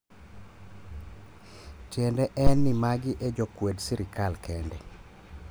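At 2.47 s a phantom power thump hits the speech. It lasts until about 2.89 s. Switching phantom power on a live input sends a sudden voltage step through the coupling capacitors into the signal path. The result is a deep, low-frequency thud. It peaks at about -8 dBFS. The thump then dies away quickly, with a decay of around 95 ms, leaving a short, dull tail.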